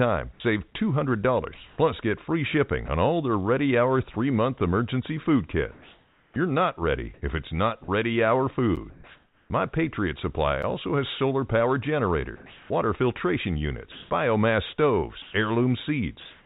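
From 0.32 to 2.88 s, just before "on all their", the sound is chopped by the voice detector, likely because the sender's detector kept switching transmission off and on. About 340 ms of quiet syllable edges are swapped for comfort noise, so the sound stutters. On a spectrogram the hiss shows as smooth, featureless bands in the gaps, all under the 4 kHz ceiling of the narrowband call.

After "three month emergency food", from 5.72 to 9.5 s, the same chopping returns more heavily, with about 1360 ms replaced. Inside it, at 8.76 s, a block of digital silence appears: roughly 10.7 ms of silence, which fits a 512-sample buffer the program failed to fill in time. There is no fade, so it is heard as a tick. On the waveform it is a flat line with vertical cliffs on both sides. The spectrogram shows a thin black column framed by broadband streaks.

A second identical silence block at 10.62 s gives the same tick and the same flat notch.

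From 12.36 to 16.45 s, after "has solar power", the voice-detector chopping resumes until the end, with about 900 ms filled by comfort noise.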